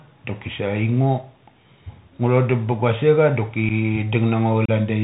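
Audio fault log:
Throughout: Bluetooth CVSD headset codec. The speech is confined to a narrowband channel with nothing above 4 kHz, so it sounds dull and telephone-like. The one-bit delta modulation, which fits a 64 kbps CVSD link, cannot track fast, loud high-frequency movement, so s sounds turn scratchy and loud peaks distort where the adaptive step lags the waveform. A granular hiss from the coarse step quantisation sits under the speech for the whole clip, and the damage is plainly audible.
3.69–3.72 s and 4.65–4.70 s: unconcealed Bluetooth headset packet loss. At 3.69 s about 7.5 ms of audio drops out, consistent with a single lost voice packet. At 4.65 s a longer 30 ms gap follows, pointing to a few consecutive packets lost. Nothing fills either hole, so the speech cuts out with abrupt edges. After each gap the CVSD decoder's step size has to rebuild, so the speech returns quieter for a moment.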